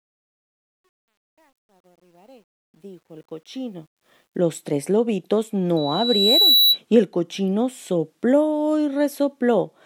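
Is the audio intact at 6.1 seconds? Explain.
No, 6.1 s falls inside a loudspeaker feedback squeal from 5.76 to 6.78 s, right after "tres lobitos": a mic-to-speaker loop swells a 3.9 kHz tone, about 5 dB above the speech.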